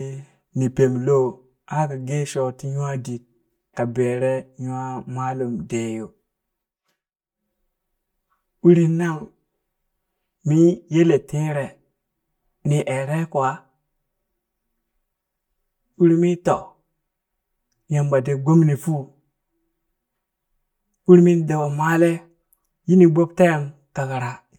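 Speech, and the whole thing has channel delay (comb filtering) from start to finish: it sounds hollow and a bit phasey, like it's coming down a tube. One side is running about 5 ms late, so when the two get summed to mono, the shared sound cancels at evenly spaced points. The first notch lands somewhere around 100 Hz, with more repeating up the spectrum, which is what's thinning out the voice.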